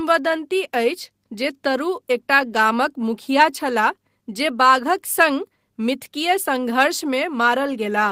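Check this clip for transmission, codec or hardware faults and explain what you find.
Nothing to flag here; I listened through this speech clip and didn't catch any transmission, codec or hardware trouble along the way.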